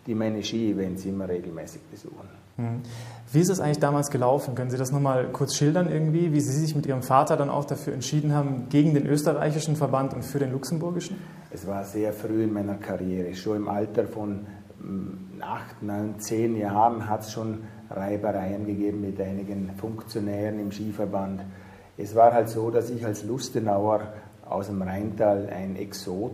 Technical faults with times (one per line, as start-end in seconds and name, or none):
none